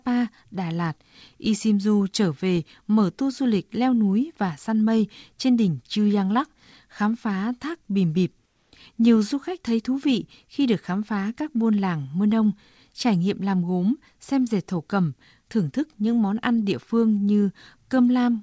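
From 8.46 to 8.72 s, the pause's background turns into steady, featureless hiss about 4 dB quieter: comfort noise in place of the background, likely from discontinuous transmission.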